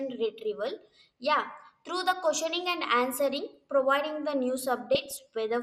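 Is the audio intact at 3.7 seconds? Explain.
No, MP2 compression affects the speech at 3.7 s and throughout: the dull, gurgling, granular sound likely comes from starved sub-bands switching off and coarse quantisation, fitting roughly 80 kbps.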